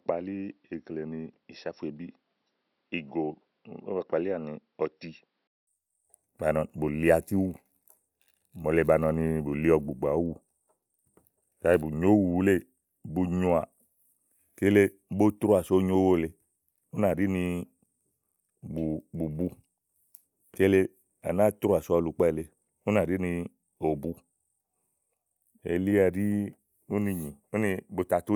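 Input switched to a poorer device from 0 to 5.67 s. The speech is band-limited, with nothing above 5.7 kHz, runs a few decibels quieter and carries a faint added noise floor, likely from a lesser microphone. A 200 ms silence marks the switch back.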